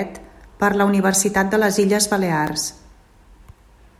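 At 2.47 s there's a sharp snap sitting on top of the speech, an electrical switching spike. It's a tiny burst, only a couple of milliseconds long, but it peaks fairly hot, around -10 dBFS. The likely cause is a nearby switch, motor or static discharge throwing off a brief arc that the audio line picked up, which is why it lands as an abrupt click rather than blending into the speech.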